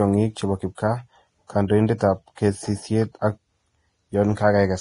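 Throughout the speech, the treble is hissy and grainy, with nothing above 10.6 kHz, roughened tones and smeared consonant attacks. This is likely heavy Vorbis compression at a low bitrate around 29 kbps, where coarsely quantised high-frequency detail turns into noise.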